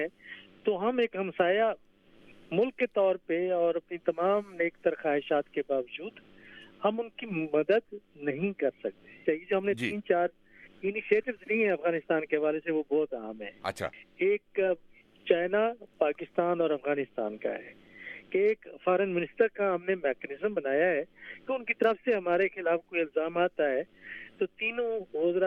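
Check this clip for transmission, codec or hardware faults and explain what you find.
There's one hardware-type fault worth flagging. At 21.84 s you get an electrical switching spike, a sharp snap riding on top of the sound, peaking somewhere around -30 dBFS. It's likely a nearby switch or motor arcing briefly, with the line picking up that burst as a click.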